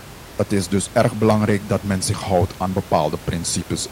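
No faults are present in this recording.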